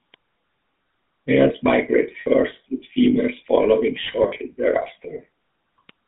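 GSM full-rate codec runs throughout this speech, its rate consistent with 13 kbps. It models the vocal tract and drives it with sparse, regularly spaced pulses, leaving a plainly audible buzzy, gravelly roughness, with the line band confined to roughly 150 Hz to 3.6 kHz.

Lost GSM frames occur from 2.2 to 2.27 s, just before "with females following", where about 60 ms is missing, which fits three 20 ms frames. They recur from 4.04 to 4.39 s, just after "with females following", with about 120 ms missing across 320 ms and the longest run around 40 ms. Each gap is filled by repeating the last good frame, heard as a brief rough, metallic ring.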